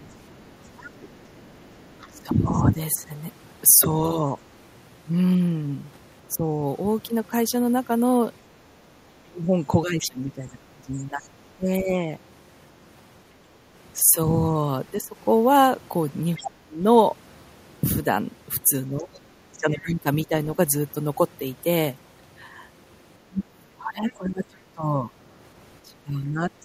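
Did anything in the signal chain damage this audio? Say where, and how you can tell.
Yes, and it's in the call processing, most likely the echo canceller on the talker's end. You can hear the other side's voice leaking through in four stretches: 0.02 to 2.18 s, 10.0 to 11.28 s, 16.35 to 19.89 s and 24.09 to 26.64 s. It sits roughly 20 to 30 dB under the main speech. The far end is playing out of a loudspeaker, the mic picks it up, and the canceller isn't subtracting all of it.

The same stage also shows speech suppressed in double talk between 2.11 and 26.41 s. The talker's level keeps ducking while the other side is active, at worst by about 25 dB, and it adds up to something like seven seconds of dipped or chopped speech. When both ends talk at once, the canceller likely can't separate the near voice from the echo, so it clamps down on everything and takes the wanted speech with it.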